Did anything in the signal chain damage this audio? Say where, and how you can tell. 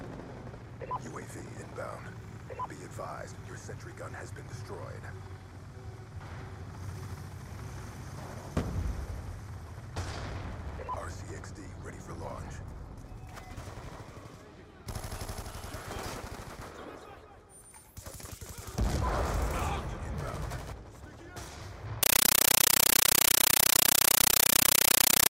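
Yes. From 22.03 s to the end at 25.30 s, the sound is replaced by very loud, chattering static. This is a compressed stream played as audio, a playback fault on the digital output link. An AC-3 bitstream was passed through as if it were ordinary samples and never decoded. Each frame comes out as a 9.33 ms burst of noise followed by silent padding, 31.25 times a second. That gives the rattling rhythm, which fits a 448 kbps Dolby Digital stream.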